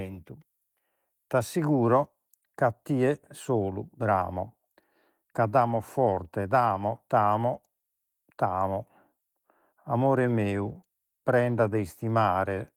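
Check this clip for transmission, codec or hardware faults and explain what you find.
I find no transmission, codec or hardware faults to report in this speech.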